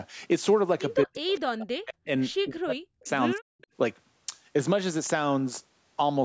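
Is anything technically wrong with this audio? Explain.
Yes. The speech has two problems typical of a hands-free call.

Speech suppressed in double talk occurs from 1.04 to 2.09 s, 2.42 to 3.07 s and 3.34 to 3.44 s. The voice sinks by as much as 40 dB or so. The likely cause is an echo canceller that, with both sides talking, could not separate this talker from its loudspeaker's echo and turned everything down. Unlike a network dropout, the voice dips because the canceller turned it down.

Echo leak appears as short, faint scraps at 1.29 to 1.33 s, 3.05 to 3.09 s and 3.61 to 3.67 s. Each is a repeat of the voice trailing it by 209 ms, at about 20, 35 and 30 dB below the speech. The likely cause is loudspeaker sound reaching the microphone and slipping past incomplete cancellation. Room reverberation smears the sound continuously, but this is a distinct, delayed copy that comes and goes, over a band that stops at 8 kHz.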